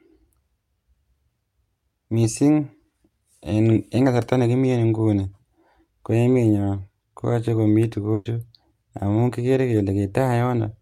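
At 8.13 to 8.27 s a burst of packet loss leaves the last sound held and fading for about 120 ms, unlike a silent dropout, before speech jumps ahead.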